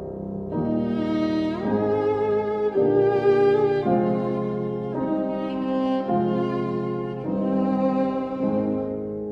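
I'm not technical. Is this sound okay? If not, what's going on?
Yes, nothing wrong can be heard in this sound.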